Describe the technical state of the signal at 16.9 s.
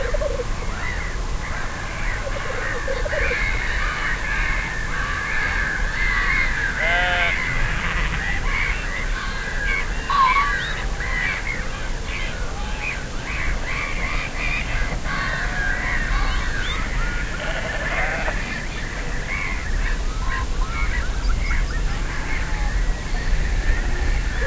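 At 16.9 s the signal is intact, with no audible fault at that moment.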